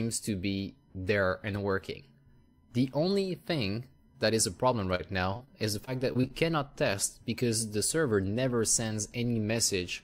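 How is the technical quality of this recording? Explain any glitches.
Two bursts of repeated packet loss (robotic sound) break up the recording. The first runs from 4.95 to 5.49 s, the second from 5.85 to 6.31 s. Each holds four short dropouts, the longest about 37 ms in the first and 24 ms in the second. The gaps are patched by stretching the preceding sound. This leaves a choppy texture with small pieces missing.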